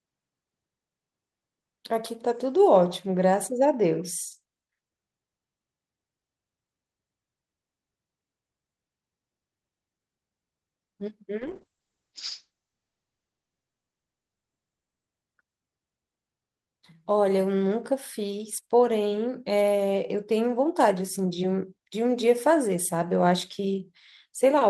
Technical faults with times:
11.40-15.13 call bitrate drop

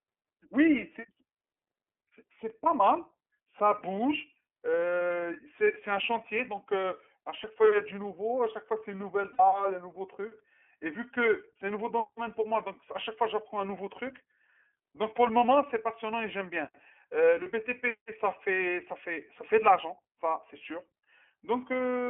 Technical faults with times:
0.00-22.09 iLBC codec
6.81-6.84 lost iLBC frames
9.32-9.40 lost iLBC frames
17.43-17.47 lost iLBC frames

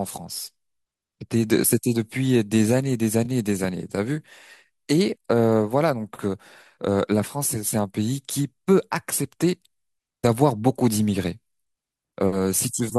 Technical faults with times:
3.24-3.26 repeated frames

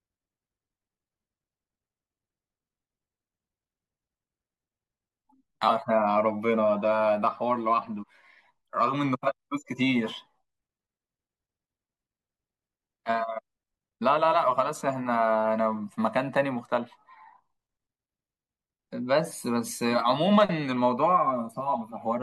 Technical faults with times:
5.67 damaged data in a compressed stream
8.02 damaged data in a compressed stream

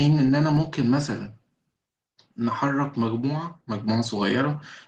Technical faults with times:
0.57-4.23 clock drift buffer slips

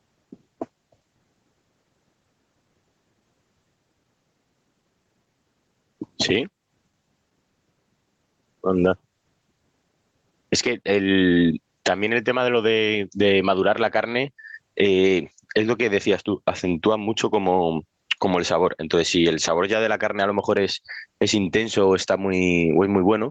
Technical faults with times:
0.00-23.31 gain pumping

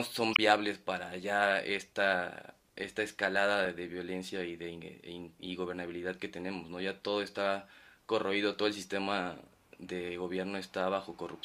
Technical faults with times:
0.30-0.39 corrupt frame decoded
3.65 corrupt frame decoded

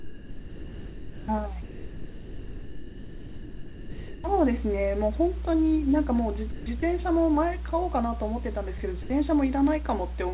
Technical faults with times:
0.00-10.34 mains hum
0.00-1.28 sound dropped by the voice detector
1.62-4.24 sound dropped by the voice detector
6.52-6.82 sound dropped by the voice detector
8.78-9.10 sound dropped by the voice detector

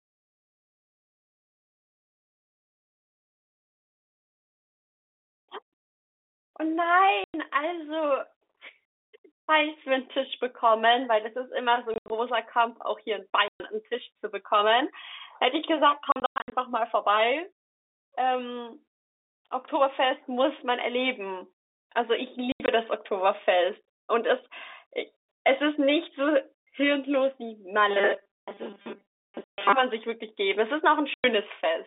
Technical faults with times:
7.24-7.34 packet loss filled with silence
11.94-12.10 packet loss filled with silence
13.48-13.60 packet loss filled with silence
16.12-16.52 packet loss filled with silence
22.52-22.68 packet loss filled with silence
27.88-29.73 robotic sound from repeated short buffers
29.44-29.58 packet loss filled with silence
31.14-31.24 packet loss filled with silence

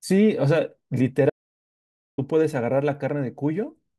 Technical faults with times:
1.30-2.18 audio dropout to silence

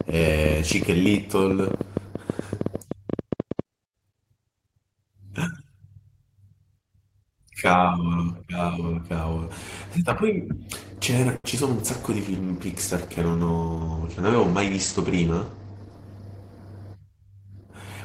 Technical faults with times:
0.01-3.60 train of clicks
11.36-11.45 short stall from a late packet
11.50-11.57 short concealed packet loss
11.79-16.76 call bitrate drop
15.13-15.76 jitter buffer speed-up

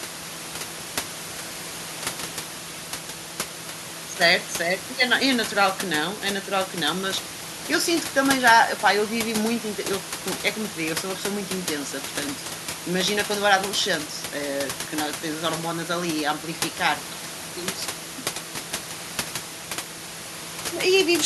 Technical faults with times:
none

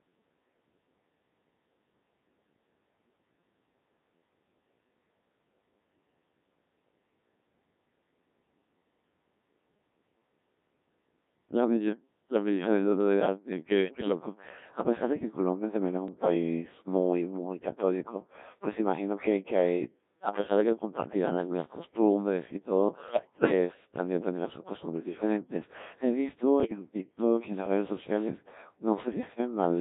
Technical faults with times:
0.00-29.81 Codec 2 vocoder
13.85-14.08 bit errors on digital voice radio
16.08-16.34 bit errors on digital voice radio
23.08-23.52 bit errors on digital voice radio
26.60-26.79 bit errors on digital voice radio

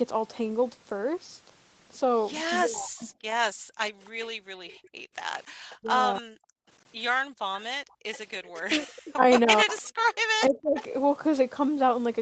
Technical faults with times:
2.61-3.08 speech suppressed in double talk
3.53-5.16 background gated by the echo canceller
4.05-5.76 echo leak
5.75-6.31 speech suppressed in double talk
6.59-8.00 background gated by the echo canceller
7.61-8.58 echo leak
8.60-10.77 speech suppressed in double talk
9.70-10.83 echo leak

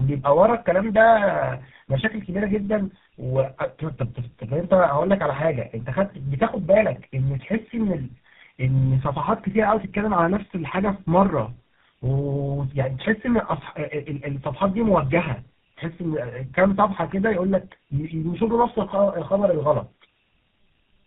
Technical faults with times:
0.00-21.06 tandem speech coding

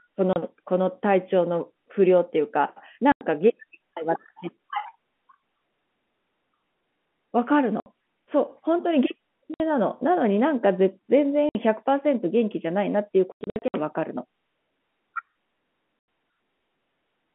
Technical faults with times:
0.33-0.36 packet loss filled with silence
3.12-3.21 packet loss filled with silence
7.80-7.86 packet loss filled with silence
9.54-9.60 packet loss filled with silence
11.49-11.55 packet loss filled with silence
13.32-13.74 packet loss filled with silence
15.99-16.08 packet loss filled with silence

